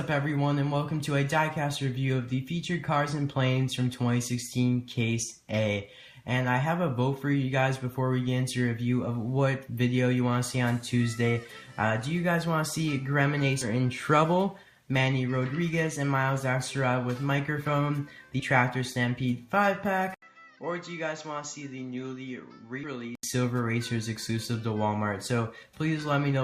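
The audio has four short jumps from compressed frames skipped, at 9.07 s, 13.61–13.66 s, 18.39–18.41 s and 22.83–22.86 s. Each time, a few whole 20 ms frames are never played, so the sound jumps ahead by roughly 40 to 70 ms. From 20.14 s to 23.23 s, an 80 ms gap is followed by a duller, boxier sound. Nothing above 7.6 kHz remains, the level falls by about 10 dB, and a new noise floor appears about 45 dB below the signal. This is likely the input switched to a poorer device, such as another microphone or a headset's call profile. The sound clears up again at 23.23 s.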